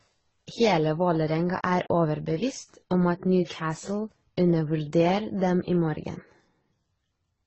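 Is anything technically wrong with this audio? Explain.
Yes. Throughout, the speech sounds dull above 8.1 kHz, with layered artefacts, likely from transcoding between lossy codecs, consistent with low-bitrate AAC followed by Opus.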